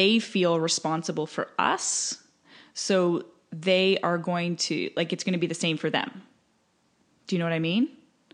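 Nothing in this speech recording stood out as a technical problem on listening.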